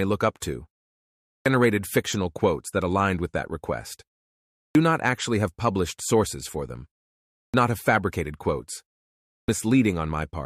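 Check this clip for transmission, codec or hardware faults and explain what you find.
There's one problem here, and it repeats: clipped start after a pause. It happens at 1.23 s, 4.50 s, 7.31 s and 9.22 s. Each time, about 230 to 260 ms of speech goes missing after a short gap of roughly half a second. It sounds like the output device dozes off in the silence and needs a moment to wake back up, so the speech snaps in abruptly with its opening sounds chopped off.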